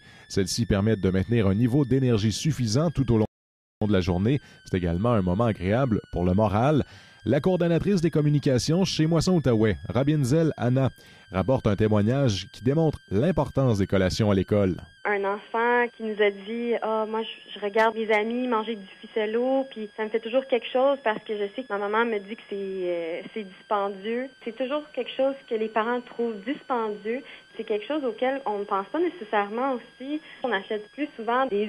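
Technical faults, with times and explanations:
Throughout: switching supply whistle. A thin, high whistle sits under the sound, roughly 30 dB below it. Its pitch centres around 1.5 kHz but drifts between about 1.5 and 1.8 kHz. A switching power supply is running in an audible burst mode or beating with another one, and its rate shifts with load.
3.25 to 3.82 s: rebuffering stall. The audio drops to silence for about 0.56 s, then carries on exactly where it stopped. The player ran out of downloaded audio and waited for more data. Nothing is skipped, but the gap adds time to playback.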